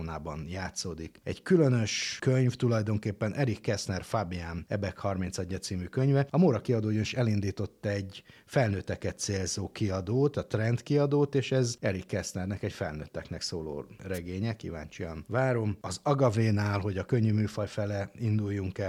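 At 14.14 s a wireless microphone noise hit breaks into the speech and lasts until about 14.19 s. It is a brief swish of static, roughly 50 ms long. The radio link from an analogue FM microphone faded for a moment as reflected signals cancelled at the receiver. With the carrier that weak, the receiver's own noise rose up.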